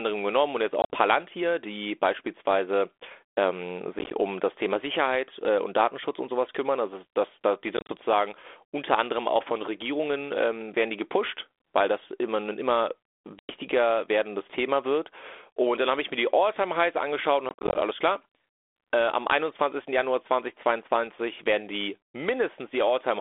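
Packet loss on an ADPCM call breaks the speech at 0.82, 3.99, 7.77, 13.39 and 17.49 s, the last spread over about 0.3 s with 140 ms missing. Lost stretches become silence, and the G.726 decoder's predictor and step size drift from the sender's. The waveform shows square-edged flat gaps, runs up to 100 ms. The spectrogram shows vertical blank bars across the 300 to 3500 Hz band, then speech that returns slightly distorted.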